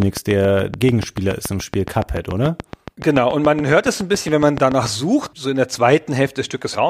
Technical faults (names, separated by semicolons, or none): train of clicks